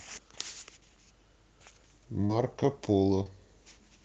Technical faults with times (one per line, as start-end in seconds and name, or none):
2.25-2.31 short concealed packet loss
2.29-2.31 lost packet rebuilt from error correction
3.23-3.27 short concealed packet loss
3.25-3.27 lost packet rebuilt from error correction